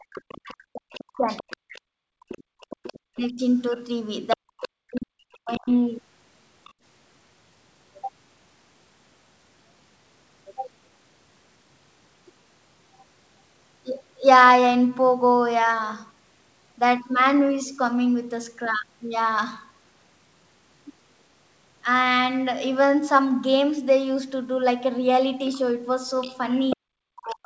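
From the first moment to 1.29 s, the echo canceller likely could not tell the near talker from the loudspeaker echo while both sides spoke at once, so it pulled everything down. This is speech suppressed in double talk: the talker's voice sinks by as much as roughly 40 dB. From 0.29 s to 5.01 s, the canceller likely left part of the loudspeaker signal in the microphone, which is the other side's voice leaking through. A second voice runs underneath the talker at around 20 dB below. Between 1.57 s and 2.6 s, with the loudspeaker active, the canceller clamped the microphone hard. The result is background gated by the echo canceller: the room sound falls away by about 35 dB for under a second in total, then returns once the canceller releases. Double-talk suppression returns from 3.1 s to 3.41 s as a short dip of a fraction of a second, and again from 4.35 s to 5.7 s, where the voice dips for well over a second. 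A brief scrap of leaked far-end voice, fainter at around 30 dB down, appears at 6.64 to 6.73 s. Near the end, from 25.48 s to the close, leakage comes back at about 20 dB below the talker. Inside it, from 26.76 s to 27.42 s, the talker is ducked deeply once more. Throughout, the band stops at 8 kHz, as expected from the G.722 call path.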